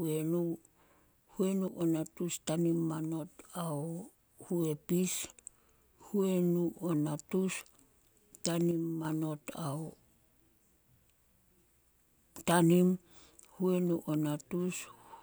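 At 1.68–1.81 s and 8.71–9.05 s, likely one channel drops out: speech dips abruptly by about 6 dB, a sharp step-down in waveform height.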